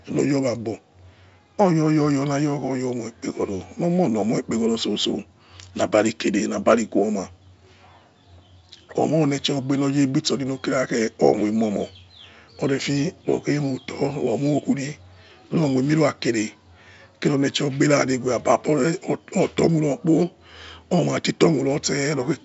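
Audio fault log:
No faults logged; the speech carries G.722 wideband telephone coding, with the band ending near 7.7 kHz and the lower band's noise floor fitting the full 64 kbit/s mode.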